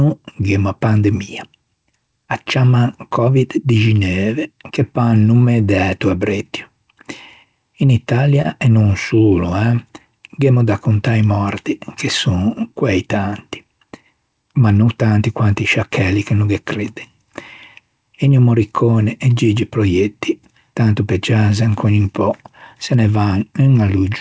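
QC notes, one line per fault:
8.42–8.46 s, short stall from a late packet: a packet arrived late and the jitter buffer emptied, so the receiver stretched the last sound by 25 ms, then resumed with nothing lost. On a spectrogram the harmonics briefly freeze, and the waveform shows near-identical repeating cycles.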